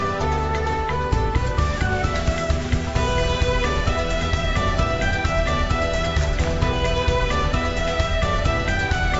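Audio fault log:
Nothing stood out on listening, and no line in this log is needed for any part of the clip.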